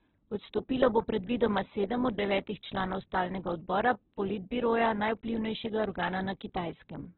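A speech clip in which a low-rate encoder has stripped the signal, most likely Opus compression in its music mode at a bitrate that sounds like around 8 kbps: the spectrum stops near 4.1 kHz, and the narrowed band with heavily damaged, grainy, rough tones runs throughout. Three bit error spikes, each a single flipped bit in one sample, make the value jump and return as isolated sharp broadband ticks: at 2.10 s, between "bo predvidoma sedem" and "od devetih članov stalnega", then at 4.86 s and 5.84 s.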